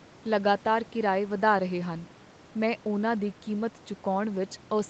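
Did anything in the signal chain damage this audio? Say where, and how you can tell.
No, nothing in the signal chain damaged this audio; the call microphone processing and the WebRTC call path behave as expected, with nothing above 8 kHz, which points to a 32 kbps Opus setting.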